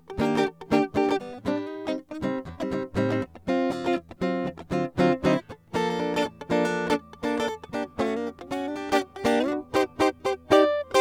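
A corrupt frame decoded at 9.40 s breaks into the music as a single brief blip. Bits inside one compressed frame were damaged, yet the decoder played it rather than concealing it, so misread gain values and spectral codes pushed energy into the wrong frequencies for the span of that one frame. The stray burst peaks at roughly -30 dBFS.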